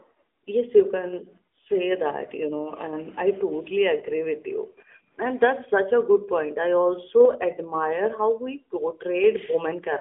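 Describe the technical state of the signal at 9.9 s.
At 9.9 s the speech carries AMR narrowband mobile codec damage, present throughout. Nothing passes above about 3.7 kHz, and the line band sits near 300 Hz to 3.5 kHz. Unlike a plain telephone filter, the pulse-driven vocal-tract model adds a plainly audible buzzy, synthetic edge, which fits a 10.2 kbps mode.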